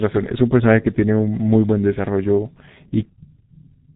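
From start to finish the speech carries heavy G.723.1 codec damage. Nothing gets through above about 3.8 kHz, so everything sounds boxed-in and muffled, and consonants smear because the coder chops the signal into 30 ms frames and only updates its model of the voice frame by frame. The result is a hoarse texture, and the thinness points to a bitrate around 6 kbit/s.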